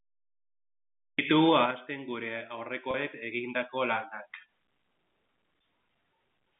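At 2.91 s the stream loses about one packet's worth of speech, 30 ms, and the receiver bridges the gap by repeating the last pitch cycle until 2.94 s. This packet loss with pitch repetition sounds like a brief, slightly buzzy held note within the telephone-band audio.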